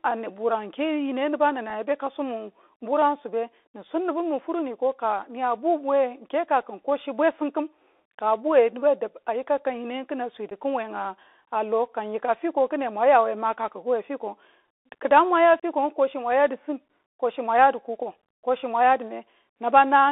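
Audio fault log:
Throughout: Bluetooth CVSD headset codec. The speech sits in a narrow telephone band, roughly 300 Hz to 3.6 kHz, so it sounds thin and muffled. Each sample is coded as a single up-or-down step, which fits a 64 kbps link. Loud high sounds outrun the step and distort, s sounds turn scratchy, and a granular hiss lies underneath.
1.70, 10.5, and 15.60 to 15.63 s: unconcealed Bluetooth headset packet loss. The speech drops out for about 4 ms, 11 ms and 30 ms, which fits roughly one, three and seven lost packets. Nothing fills the gaps, so each hole has abrupt edges and can click. The sound comes back briefly quieter.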